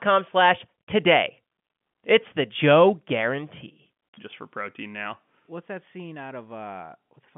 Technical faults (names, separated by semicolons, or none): none